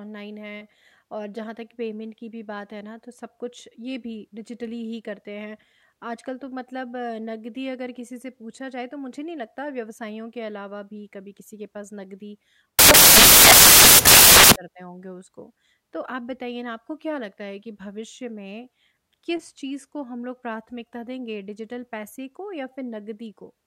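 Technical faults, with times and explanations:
12.79–14.56 s, samples built from the wrong bytes: for about 1.8 s the speech turns into loud, harsh broadband noise, close to white on the louder sounds, because each sample is assembled from mismatched bytes and the rapidly changing low-order bits land in the high-order position. Unlike ordinary added hiss or clipping distortion, the speech isn't buried under noise or harshened. It is replaced outright.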